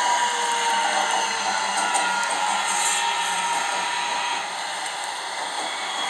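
On listening, nothing stood out as a technical fault anywhere in these everyday sounds.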